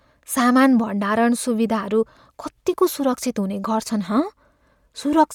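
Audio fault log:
throughout, Bluetooth LC3 compression: The speech has a plainly audible breathy, grainy edge in its upper range, with nothing above 20.3 kHz. The cause is likely the LE Audio transform codec replacing discarded upper spectrum with noise. The texture fits 10 ms frames near 48 kbps.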